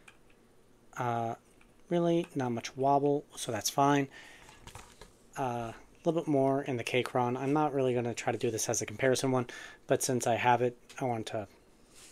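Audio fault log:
No fault is heard anywhere in the clip. Nothing in the sound calls for a timed entry in this log.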